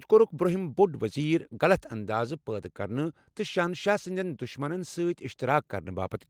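Listening to this speech recording, nothing stood out as a technical problem.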